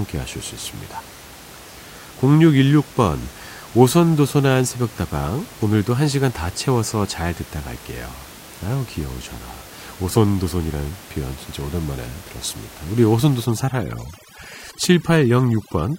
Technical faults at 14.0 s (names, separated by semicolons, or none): overdone noise removal